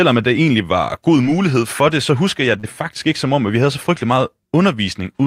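At about 2.59 s, just after "det så husker jeg", roughly 40 ms of speech arrived too late to decode. The receiver concealed this short packet loss by extending the preceding sound before blending back in by 2.65 s. The result is a brief smear before "faktisk ikke som om".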